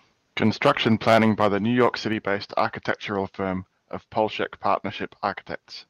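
A speech recording with harsh, crackling distortion on its loudest syllables from 0.42 s to 1.47 s, consistent with microphone overload. The peaks sound flattened at the ceiling, with the signal driven roughly 9 dB past full scale and a few percent of samples clipped. The likely cause is an input gain set too high, so the converter runs out of headroom and squares off the waveform tops, producing that gritty edge. At 1.13 s, partway through the distorted stretch, the whole signal, foreground and background alike, drops abruptly by about 2 dB, which points to the microphone volume being stepped down. The likely cause is the call software detecting the clipping and cutting the device's input gain in a single step rather than ramping it. Because this reduction is small relative to the overdrive, the crackle continues after the step until 1.47 s.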